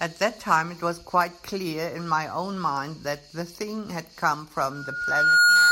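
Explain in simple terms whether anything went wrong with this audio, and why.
Loudspeaker feedback squeal starts at 4.71 s and runs until the clip ends at 5.71 s. A single high tone at about 1.4 kHz swells up over roughly three quarters of a second until it is clearly louder than the speech. The microphone was picking up the loudspeaker it was feeding, so that one pitch kept going round the loop, getting louder each time, and nothing broke the loop before the recording stopped.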